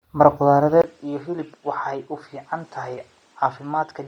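It's a speech clip with a grainy, breathy edge the whole way through. The top end sounds hollowed out and refilled with hiss, which is likely Bluetooth LC3 compression hit hard, consistent with a low-rate stream around 32 kbps using 10 ms frames. Then at 0.82 s there's a 20 ms dropout, and from there to the end the sound goes duller, with nothing above 9.8 kHz. It's about 5 dB quieter, with a new noise floor roughly 35 dB down. The likely cause is the input switching to a poorer device.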